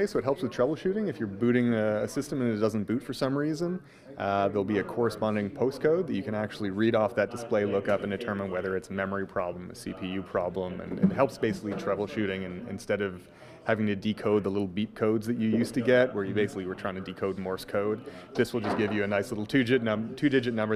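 No technical faults can be heard anywhere in the audio, and the signal stays continuous and steady throughout.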